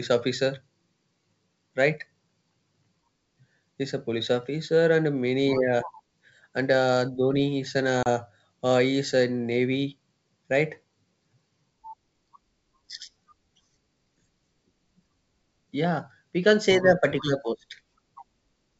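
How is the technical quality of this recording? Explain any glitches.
One glitch stands out, on a G.722 wideband call. At 8.03 to 8.07 s, packet loss on the ADPCM call cuts about 30 ms to silence. Afterwards the decoder's predictor is out of step, so speech briefly returns with slight distortion.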